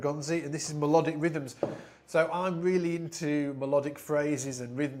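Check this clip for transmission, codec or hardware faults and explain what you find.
No faults can be heard anywhere in the clip. There is nothing to report at any point in the audio.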